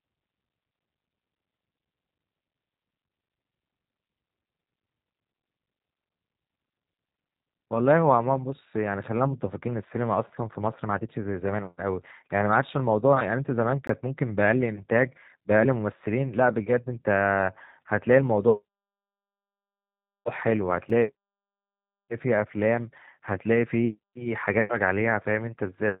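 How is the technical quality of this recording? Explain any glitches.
The technical quality is limited: the whole recording carries plainly audible low-bitrate codec damage, and two brief dropouts punch holes in it.

G.729 codec coding runs from start to finish. The speech is rebuilt from a vocal tract model, a pitch predictor and a few pulses per 10 ms frame, at a rate that fits an 8 kbit/s VoIP codec, so it sounds slightly rough and synthetic. Nothing above 3.8 kHz survives. On a spectrogram the energy stops at a hard ceiling near 3.8 kHz, with an empty band above it across all 26 s.

A block of digital silence occurs at 13.87 s, lasting about 20 ms, and another at 20.90 s, lasting about 5 ms. In each case the output buffer was likely not filled in time, so zeros went out instead of audio. The signal drops to nothing and returns with no fade. The first is heard as a short hole, and the second as a single tick. 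A waveform shows a flat line near zero with sharp cliffs on either side, and a spectrogram shows a thin vertical gap.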